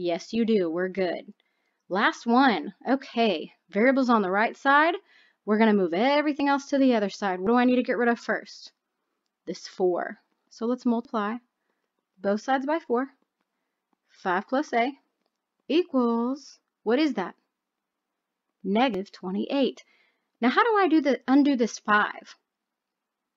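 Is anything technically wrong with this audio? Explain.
Yes. Four sudden jumps at 6.4, 7.47, 11.05 and 18.94 s skip ahead, losing a few tens of milliseconds early and roughly a tenth of a second or more later. This is likely a dropped buffer (overrun): unread samples were overwritten, splicing the edges together. Unlike an underrun, no silent gap appears.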